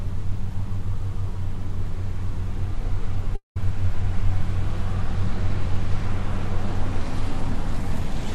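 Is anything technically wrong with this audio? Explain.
Yes, there's a gap from 3.35 to 3.57 s that sounds like a long network dropout. About 210 ms of audio is missing, and the end of the sound before it trails on as a fading buzz or hiss before roughly 140 ms of silence. The likely cause is the stream stopping while the receiver padded the hole, with audio resuming afterwards minus the lost part.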